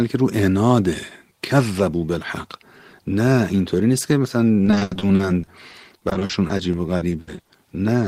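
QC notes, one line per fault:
4.65–7.51 s, repeated packet loss (robotic sound): the speech turns choppy, with short holes arriving in quick succession. The longest is about 80 ms, and roughly a quarter of this stretch is patched rather than real audio. Packets keep going missing or arriving late. Each gap is filled by stretching the last bit of sound, which gives the robotic tone, while some audio is simply lost.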